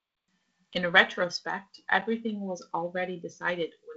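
Speech, band-limited by G.722 wideband telephone coding to about 7.6 kHz, has two blocks of digital silence, at 0.73 s (6.4 ms) and 2.01 s (8 ms). The signal drops abruptly to silence and returns with no fade, likely because the output buffer wasn't filled in time. Each gap is heard as a tick or dip, not the smoothed, smeared hole of concealed packet loss.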